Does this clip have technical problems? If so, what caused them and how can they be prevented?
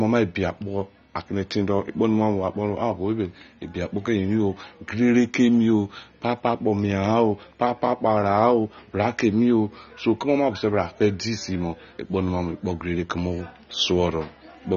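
Yes. Throughout the speech, AAC compression is plainly audible. Nothing sounds above 7 kHz, and the sound is dull and smeared, which fits a low bitrate, likely around 24 kbps. Encode at a higher bitrate.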